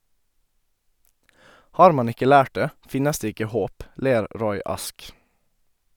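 No technical faults occur at any point in the speech.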